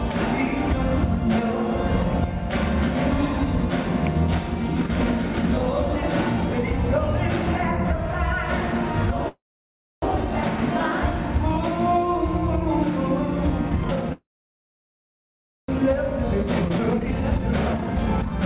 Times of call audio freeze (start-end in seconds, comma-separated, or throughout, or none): 9.28-10.04, 14.12-15.70